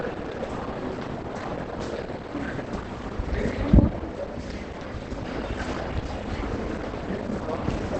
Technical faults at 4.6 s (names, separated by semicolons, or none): Opus compression